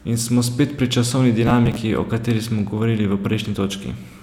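From 1.43 to 1.76 s the speech breaks into a gritty crackle, processor overload crackle: roughly fifteen deadlines missed over that stretch, each skipping a buffer of about 3 ms outright. Unlike a single dropout, it's a dense cluster of tiny hard-edged gaps that stops once the load passes.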